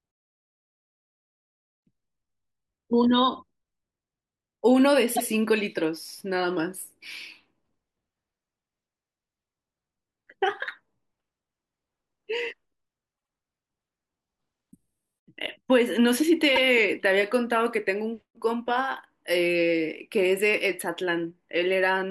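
Speech with repeated frames at three points: the 120 ms stretch at 5.15 to 5.27 s plays twice, the 72 ms stretch at 13.17 to 13.31 s plays three times, and the 72 ms stretch at 16.55 to 16.62 s plays twice. Each comes out as a short stutter, where a block of compressed frames was duplicated and decoded again. On a spectrogram the same pattern sits side by side, and the waveform shows identical segments copied back to back.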